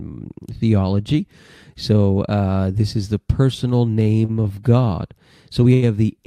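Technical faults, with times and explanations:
4.03–4.59 s, repeated stalls (stutter): the speech hesitates five times in just over half a second. Each time, packets reached the receiver later than they were due, the jitter buffer drained, and the receiver extended the preceding sound to cover the wait. About 84 ms is filled this way, roughly 15% of the span, with the longest hold at 36 ms. Nothing is lost, but the repeated holds make the passage drag and judder.
5.74–5.84 s, short stall from a late packet: one sound is held for about 86 ms longer than it should be. A single packet arrived late, and the delay stepped up by the same 86 ms. With the jitter buffer empty, the receiver stretched the last sound until the packet came in, then continued from where it had stopped. No audio is missing, but the stretched sound carries a slight buzz or dip.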